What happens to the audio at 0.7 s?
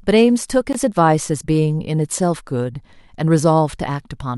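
At 0.73 s the speech drops into a brief 18.5 ms silence with smeared edges, then resumes. This is a gap at a join of encoded pieces: untrimmed encoder delay and last-frame padding.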